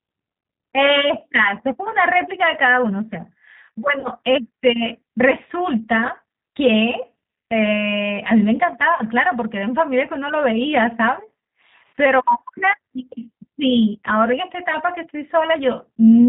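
Throughout the speech, G.729 coding at 8 kbit/s leaves a plainly rough, synthetic edge, as each 10 ms frame is rebuilt from a filter, pitch predictor and a few pulses. A spectrogram shows nothing above 4 kHz and smeared, grainy harmonics.

At 4.00 s and again at 8.95 s, VoIP packet loss concealed by the speech codec: about 40 ms of audio went missing each time, which fits two 20 ms packets. The decoder stretches the last sound into a fading buzz or coloured noise lasting to 4.08 s and 9.04 s. On a waveform this looks like repeating, shrinking cycles, and a spectrogram shows flat, frozen harmonic bands. The voice stays weakened briefly after each gap.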